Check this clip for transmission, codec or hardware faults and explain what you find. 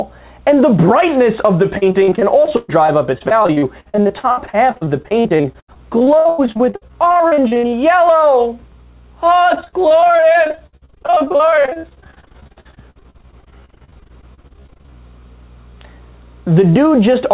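Repeated packet loss (robotic sound) appears from 1.78 to 7.74 s and from 9.54 to 14.92 s. Dozens of short gaps, up to 120 ms, are patched by repeating earlier sound, giving choppy audio with pieces missing. On a waveform this shows as repeated or flattened blocks, and a spectrogram shows smeared, stuttering bands, all below the call path's 4 kHz limit.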